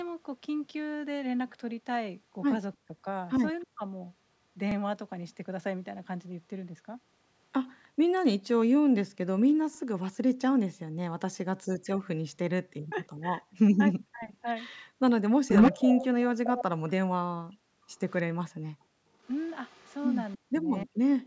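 Between 2.74 and 3.83 s the sound dips sharply in pieces, falling by roughly 40 dB over about a third of a second in total. This is speech suppressed in double talk. The likely cause is that both sides spoke at once and the echo canceller, unable to separate the near talker from loudspeaker echo, turned everything down. The same gapping returns from 11.74 to 14.31 s, with about 0.7 s affected, and from 20.36 to 20.99 s, with about 0.4 s affected.

Inside the first dip, at 3.61 to 3.66 s, a faint delayed copy trails the sound by 312 ms, about 35 dB down. This is echo leak. The likely cause is a far end on loudspeaker whose echo canceller let part of its microphone pickup return. Brief scraps recur at 7.84 to 7.88 s, about 40 dB down, and at 18.08 to 18.22 s. From 15.48 to 16.91 s the echo is actually about 5 dB louder than the direct sound. A quieter tail, about 35 dB down, runs from 19.23 s to the end.

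Short stutters occur at 4.71, 9.75, 14.79 and 19.82 s, each replaying 36 ms of audio. These are overlapping chunks. The audio was handled in 5 s blocks, and each block began 36 ms before the previous one ended, so the seam plays twice and creates a regular hiccup every five seconds.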